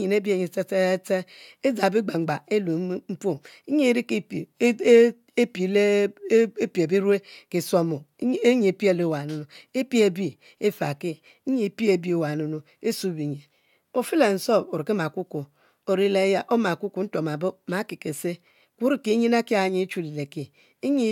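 Nothing in this speech recording stood out as a technical problem on listening.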